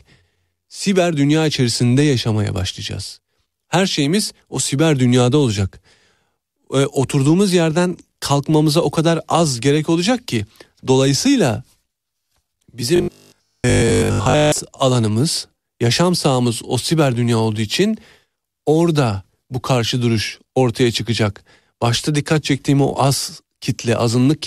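From 12.96 to 14.6 s, audio likely stopped arriving on time, and the playback software covered the gaps by looping the last short buffer while the incoming sound was skipped. The result is robotic sound from repeated short buffers: for most of that stretch the speech collapses into a rigid, metallic buzz fixed at 50 Hz, which fits a repeated chunk of about 20 ms, until normal sound resumes just before "alanımız yaşam sahamız o".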